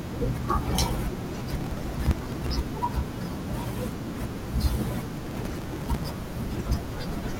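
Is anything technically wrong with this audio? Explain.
Yes. Processor overload crackle occurs from 1.44 to 2.51 s and from 5.27 to 6.13 s. The processor falls behind and skips dozens of tiny buffers of a few milliseconds each. Each skip leaves a hard-edged gap. Together they sound like a gritty, tearing crackle over the speech.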